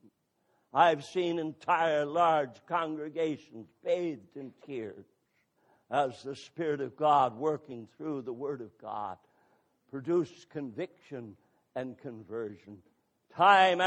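Skips at 5.53 s and from 7.67 to 7.72 s, where the audio jumps forward about 100 ms and then about 50 ms. These are compressed frames skipped: whole 46.4 ms frames, roughly two and then one, never reached the output.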